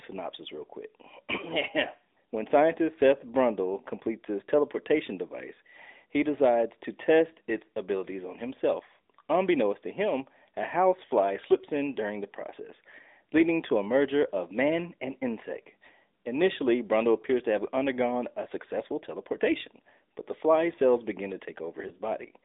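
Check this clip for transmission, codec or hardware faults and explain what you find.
Two faults are present: narrowband mobile coding throughout, and one brief dropout near the end.

AMR narrowband mobile codec, throughout: the speech has been squeezed into a phone channel running from about 250 Hz to 3.7 kHz, so it sounds thin and boxed-in. The codec rebuilds the voice from a vocal tract model excited by a few pulses per subframe, and the plainly audible buzzy, synthetic edge fits a mid-rate mode around 10.2 kbps.

Lost AMR speech frames, 21.88 to 21.92 s: the brief dip sounds like a single lost frame of about 20 ms. A frame failed its checksum, so the decoder repeated the last good pitch and vocal tract settings at reduced gain. The result is a short warble or drop in level before the voice returns weak or rough for a moment.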